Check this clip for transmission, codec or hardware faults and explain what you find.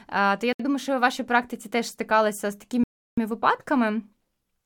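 The speech drops out twice. From 0.53 to 0.60 s, a 67 ms silence falls just before "думаю що у вашій". From 2.84 to 3.18 s, right after "практиці теж стикалися з", the sound stops for 339 ms. Each gap is clean silence, then speech resumes. The likely cause is a Bluetooth stall. Interference delayed packets, the headphones' buffer ran empty, and playback paused until resent data arrived.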